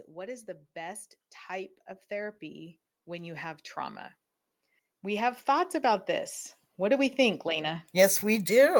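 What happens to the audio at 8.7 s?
Nothing goes wrong at 8.7 s; the audio there is intact, with no dropout, click or distortion.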